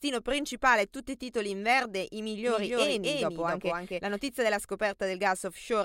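A speech clip with a doubled audio track from 2.47 to 4.29 s, just after "titoli in verde i": a full-band copy trails about 300 ms behind at roughly equal level, likely from a second, slower capture path, and appears as abruptly starting and stopping offset, overlapping waveform and spectrogram patterns.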